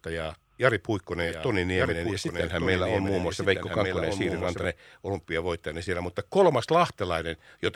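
Speech with a doubled audio track from 1.20 to 4.64 s, starting just before "olympiavoittajana siellä": a second copy about a second late and about 5 dB quieter, likely from a slower capture path. Unlike echo, it has no decay or room colour and starts and stops abruptly.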